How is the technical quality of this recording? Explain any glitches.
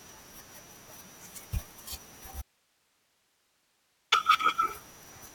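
The speech has one clear glitch. From 2.42 to 4.12 s, an audio dropout to a faint residue leaves only hiss about 40 dB down for 1.7 s, likely from a brief signal loss. The waveform shows an abrupt flat gap, and the spectrogram shows a pale noise band.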